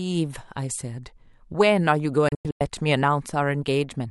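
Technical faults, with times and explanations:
2.28–2.61 s, digital broadcast dropout: The speech mutes in several short holes over about 320 ms, with about 224 ms lost in total. The longest gap is 96 ms. Each cut fades in 3 ms. The receiver lost frames, which points to about seven, and muted until good ones returned.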